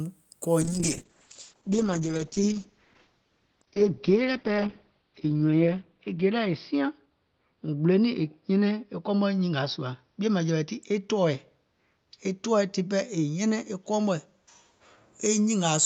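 A call bitrate drop begins at 0.63 s and runs to the end. A falling bandwidth estimate pushes the encoder from 64 to 8 kbps, holding the minimum for 4.4 s, and cuts bandwidth from 20 kHz to 6 kHz, leaving the speech muffled, coarse and watery.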